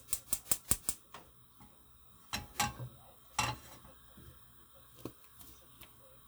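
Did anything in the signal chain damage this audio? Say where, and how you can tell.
No, nothing in the chain audibly damaged these everyday sounds, and no stage shows any evidence of a fault.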